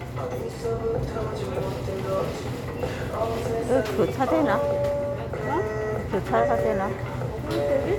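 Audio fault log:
Nothing stood out on listening to these sounds.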